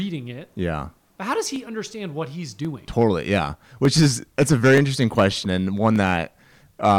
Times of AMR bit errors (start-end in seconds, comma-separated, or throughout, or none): none